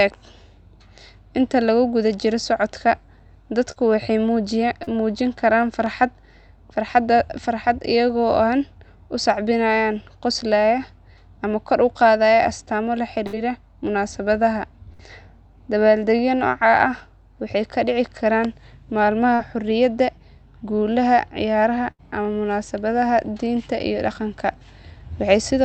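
At 3.71 to 3.78 s and 4.84 to 4.89 s, short concealed packet loss: about 40 ms of audio never arrived, and the decoder extended the preceding sound to cover the gap. It is heard as a brief smear or wobble. A spectrogram shows a short stretch of flattened, repeated harmonics or smooth noise, and the waveform shows a slightly too-regular patch. A burst of packet loss follows at 13.27 to 13.35 s and 14.93 to 15.01 s, each losing about 60 ms. The last sound is held and fades, producing a buzz or hiss, then the audio resumes with that stretch missing. On a spectrogram these appear as frozen harmonic bands that dim out, with the waveform envelope decaying before a sudden restart. Another short concealed loss at 19.35 to 19.41 s behaves like the first two. At 21.91 to 22.01 s the longest burst drops about 80 ms and leaves a held-then-fading gap. Throughout, the Opus call path keeps content below 8 kHz, visible as a flat ceiling on the spectrogram.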